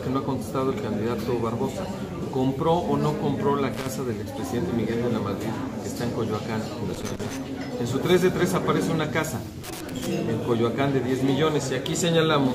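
Loose connector crackle hits at 3.74–3.86 s, 6.95–7.37 s and 9.64–10.06 s: a flaky contact chopping the signal, giving ragged bursts of scratchy crackle.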